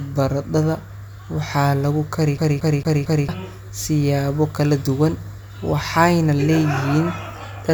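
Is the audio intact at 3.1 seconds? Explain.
No. A CD stuck on one turn runs from 2.38 to 3.29 s: the laser keeps jumping back one track, so the same 0.23 s slice of speech repeats four times, each pass ending in a brief mute, giving a fast, even stutter.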